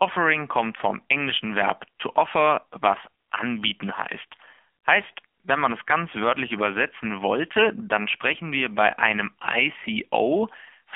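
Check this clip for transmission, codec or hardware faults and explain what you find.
One fault runs through the whole clip: AMR narrowband mobile codec damage. The speech sits in a 300 Hz to 3.4 kHz band. The codec rebuilds the voice from a vocal-tract model fed by sparse pulses. The result is plainly buzzy and synthetic, which fits a low rate near 7.4 kbps.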